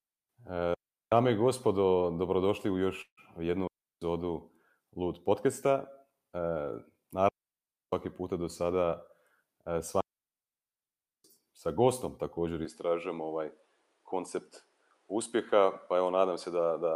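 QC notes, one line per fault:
0.74–1.12 s, 3.67–4.02 s, 7.29–7.93 s and 10.01–11.24 s: digital wireless dropout. Each is a clean hole of near silence, muted for 0.38 s, 0.34 s, 0.64 s and 1.24 s. The third ends just before "puta do sada" and the fourth just before "sa gostom također". The radio link lost too much data to decode, so the receiver faded to mute almost instantly and then came back. There is no noise burst on either edge.
3.01–3.20 s: long network dropout, heard just after "i gospodo dobrodošli u". About 120 ms of audio never arrives. The receiver stretches the last sound into a short fading buzz for roughly 0.16 s, then leaves about 60 ms of silence before speech resumes, with the lost part missing. The timing after the gap is shifted by a few tens of milliseconds. The likely cause is late or lost packets on the network path, with the jitter buffer concealing the gap and then resynchronising.
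12.65–16.95 s: input switched to a poorer device. The sound turns duller from one moment to the next with no silence at the switch, and nothing passes above 11.4 kHz. A new background noise sits about 40 dB below the speech, while the overall level barely changes. The narrower band and different noise floor point to the system likely moving to another microphone or a headset's reduced-bandwidth profile mid-recording.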